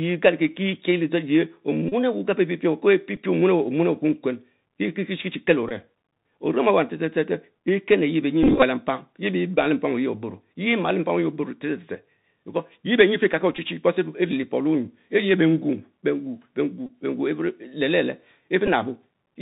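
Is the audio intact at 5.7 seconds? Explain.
No. From 5.69 to 5.72 s a brief buzz near 267 Hz appears: a Bluetooth headset packet repeat, where about 15 ms of lost audio, which fits four 3.75 ms packets, was filled by re-decoding the last packet. The sound there is also dull and scratchy with granular hiss, from the Bluetooth CVSD headset codec, whose one-bit 64 kbps coding passes nothing above 4 kHz.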